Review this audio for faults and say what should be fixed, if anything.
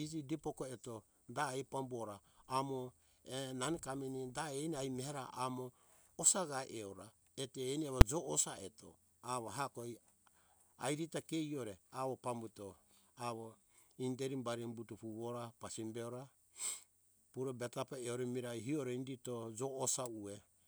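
Invalid numbers at full scale at 8.01 s, right after "eto eni amo": a single hard bang cuts through the speech. A calculation in the processing chain produced infinite or invalid values, and these were clamped to the largest possible sample value, pinning the output at one extreme value, far beyond the speech peaks, for one whole processing block. That block lasts only about 5 ms, which fits a 256-sample block, so the loud pops at its start and end merge into one sharp crack instead of two separate clicks. To prevent it, check each block for non-finite values and replace them with silence before they reach the output.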